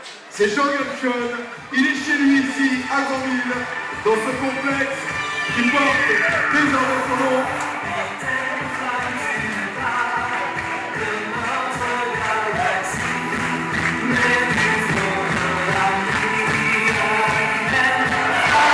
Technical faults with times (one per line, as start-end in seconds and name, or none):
none